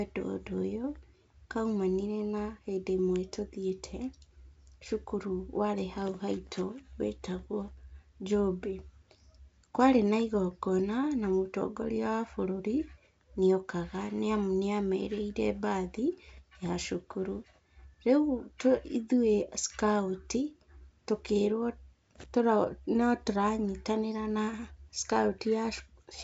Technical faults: none

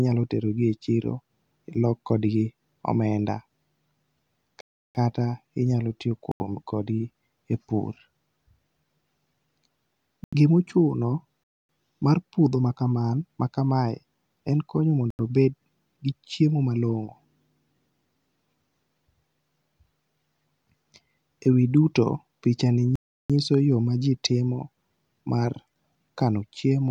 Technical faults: block of digital silence

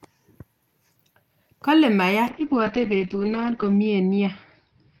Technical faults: call bitrate drop

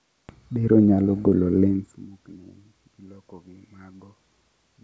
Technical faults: none

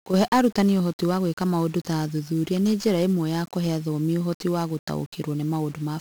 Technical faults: 1-bit DFPWM compression

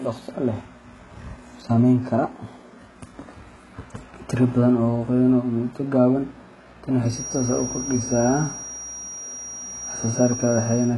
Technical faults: HE-AAC compression; feedback whistle

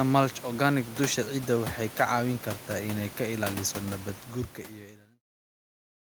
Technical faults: none

